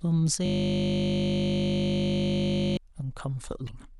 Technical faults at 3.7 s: damaged data in a compressed stream

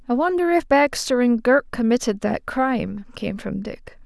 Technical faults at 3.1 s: none

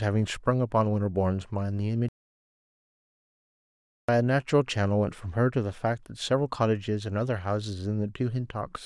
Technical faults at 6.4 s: none

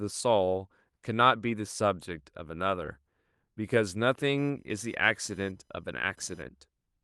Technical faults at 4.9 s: computer activity noise

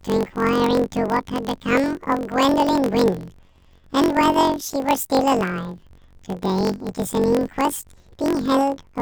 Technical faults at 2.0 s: planar audio read as interleaved

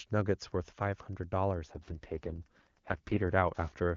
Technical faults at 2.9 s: Wi-Fi interference; AMR rate drop

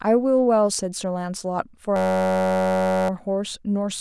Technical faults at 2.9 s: system hang loop

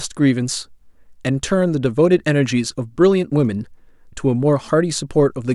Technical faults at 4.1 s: none

